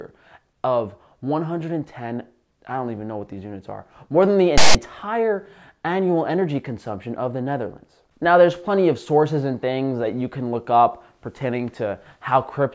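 A block of text tags was decoded as file tags played as audio, producing a hard-edged, loud, lopsided rasp from 4.58 to 4.75 s in the audio.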